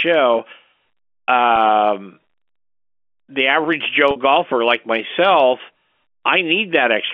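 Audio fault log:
1.56 s packet loss with pitch repetition: a single lost packet of about 10 ms was bridged by repeating the last pitch period, leaving a brief, slightly held buzz.
4.11 to 4.16 s packet loss with pitch repetition: about 50 ms went missing between "the average" and "golfer like myself"; the repeated pitch period fades toward silence before speech cross-fades back.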